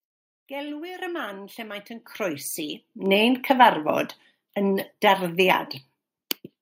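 At 1.02 s the whole sound abruptly jumps louder by about 7 dB, and at 2.04 s it jumps again by about another 7 dB. The speech and the room noise behind it rise together in a single instant. This is a microphone volume step-up: the call software judged the input too quiet and raised the device's input volume in one discrete step, twice, rather than ramping it smoothly.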